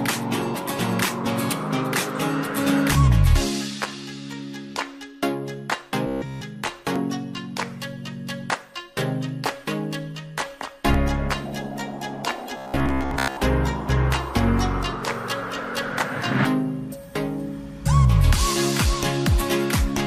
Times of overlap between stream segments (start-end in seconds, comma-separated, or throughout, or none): 2.95, 6.96, 10.94